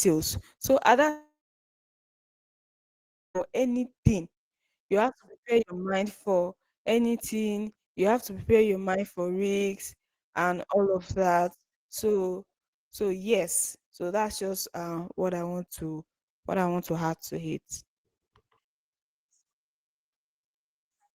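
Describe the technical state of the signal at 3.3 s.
At 3.3 s the signal sits near the end of a long network dropout spanning 1.09 to 3.37 s, likely from audio packets that never arrived. The receiver stretched the last sound into a brief fading buzz, then held silence for about 2 s. Speech returns at 3.37 s with the missing 2.26 s skipped over. Unlike a short concealed packet loss, this gap is long enough to outlast the fill and turn into plain silence.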